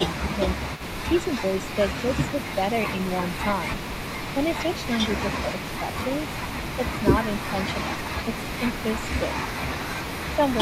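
From 0.09 to 5.18 s there's an echo leak: a faint copy of the speech trailing the original by 292 ms, roughly 20 dB under it. Most likely the far end is on a loudspeaker and its echo canceller isn't fully removing what its microphone picks up, so some of it gets sent back. Early in that stretch, between 0.27 and 0.38 s, there's speech suppressed in double talk. The speech dips by around 5 dB for about a tenth of a second. That's likely the canceller treating the overlap as echo and pulling everything down while both sides are active. The echo leak is back from 5.54 to 8.97 s and again from 9.28 to 10.58 s, with the same 292 ms lag. It's louder this time, at roughly 15 dB below the speech, so the doubled, slapback quality is easier to notice.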